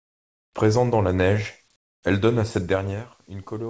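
From 0 to 0.53 s, and again from 1.76 to 2.03 s, the real background is replaced by comfort noise: a steady, featureless hiss, about 26 dB and then about 21 dB quieter than what surrounds it. The likely cause is discontinuous transmission, where the receiver fills the pauses with synthetic noise shaped like the background. Unlike a fader dip, the level drops abruptly rather than smoothly, and the texture turns uniform.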